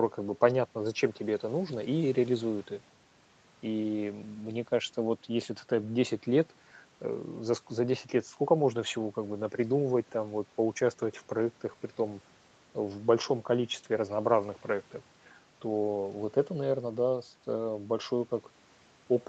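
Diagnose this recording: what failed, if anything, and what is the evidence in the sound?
Nothing has failed here: the speech just carries the ordinary stamp of a call, with the top end stopping around 8 kHz, as you'd expect from the call microphone processing and the Opus codec on the WebRTC path.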